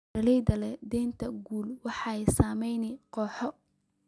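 No technical faults can be heard to describe at any point in the recording.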